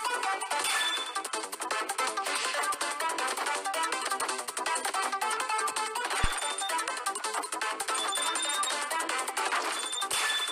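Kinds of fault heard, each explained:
Phantom power thump: at 6.24 s a deep, low-frequency thump breaks in and has faded by about 6.34 s. It peaks at about -15 dBFS and decays in 22 ms. It happens when a supply voltage is switched on or off while the input is live. The sudden DC step pushes through the coupling capacitors as a single bass pulse, which dies away as they settle, here quickly and well below full scale.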